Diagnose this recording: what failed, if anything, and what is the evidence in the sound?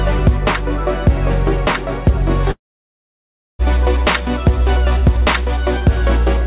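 The failure is at the network stage, most likely a long network dropout in which packets stopped arriving for about 1.1 s, from 2.51 to 3.62 s. The receiver stretches the last received sound into a brief fading buzz, then leaves about a second of silence before the audio resumes mid-flow with that stretch missing. Before and after the gap, the sound has the 4 kHz ceiling of the narrowband call codec.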